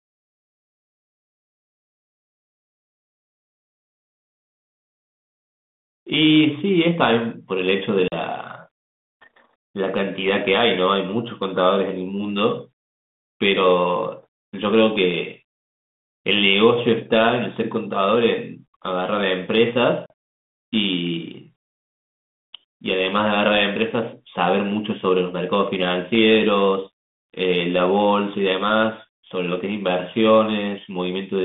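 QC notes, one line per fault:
8.08–8.16 s and 20.06–20.10 s, packet loss on an ADPCM call: each gap silences about 40 ms (roughly two packets) with hard edges. The decoder's adaptive predictor and step size lose sync with the sender's, so speech resumes with brief distortion before settling.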